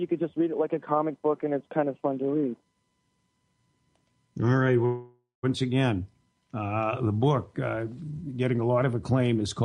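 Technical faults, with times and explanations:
4.85–5.45 s, call audio freeze: packets were likely held up in transit and the jitter buffer ran dry, so the receiver stretched the last sound into a fading buzz ending in 150 ms of silence. Playback then resumes where it stopped, nothing lost, but 577 ms later.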